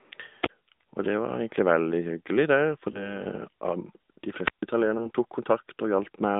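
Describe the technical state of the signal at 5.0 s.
At 5.0 s a lost AMR speech frame, between 4.98 and 5.11 s, gives a brief dip or warble as the decoder repeats the previous frame's settings at falling gain. The gap sounds like a single lost 20 ms frame: a smeared, briefly fading sound rather than the hard silent click of a dropout. Underneath is the AMR narrowband mobile codec, whose audio is band-limited to 200 Hz to 3.7 kHz with plainly audible buzzy, synthetic coloration consistent with an AMR-NB mode near 10.2 kbps.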